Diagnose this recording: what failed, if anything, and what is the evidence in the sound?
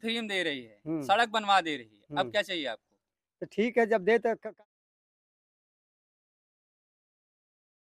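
Nothing in the signal chain failed: a smooth, deliberate fade-out begins at around 4 s and reaches silence by 4.66 s, with no click or hard edge at either end.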